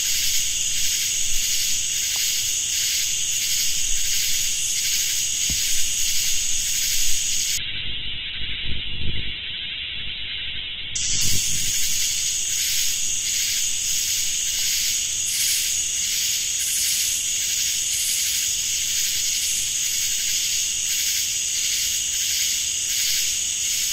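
At 7.58 s there's a call bitrate drop: the connection's bandwidth estimate fell, so the encoder was told to spend far fewer bits. The sound goes coarse and watery, and the top end collapses from 20 kHz down to about 4 kHz, which fits a fall from roughly 48 kbps to 8 kbps. It bottoms out for about 3.1 s, muffled and rough, before the bitrate recovers and the treble returns by 12.79 s.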